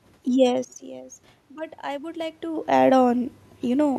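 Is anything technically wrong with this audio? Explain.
Yes. From 1.48 to 2.75 s the speech and the room noise behind it swell together by about 4 dB. This is automatic gain rising: the level at the microphone had dropped by about 17 dB, and the gain control slowly raised its gain to compensate.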